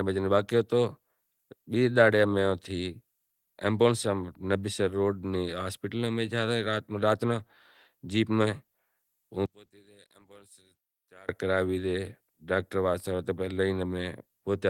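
A speech recording in which, from 9.46 to 11.29 s, the centred voice nearly vanishes, dropping by about 28 dB to a faint residue before returning ahead of "کراوی زے ڈاکٹر". The likely cause is one channel inverted, so the shared centre cancels when the stereo pair is summed to mono.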